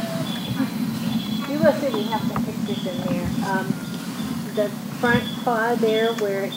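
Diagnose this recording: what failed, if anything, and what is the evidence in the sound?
Nothing failed: no stage in the chain, from wiring through conversion, buffering, processing and transport to storage and playback, leaves any audible trace anywhere in the recording.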